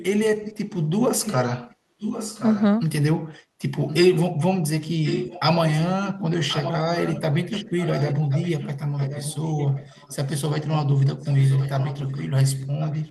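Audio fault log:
0.00–0.04, 0.39–0.83, 1.24–1.37, 1.70–2.64, 3.88–4.22, 5.03–5.40, 5.73–10.70, 11.21–13.10 s: echo leak. A copy of the speech returns 1.07 s late, some 10 to 20 dB quieter. Likely loudspeaker pickup the far-end canceller missed.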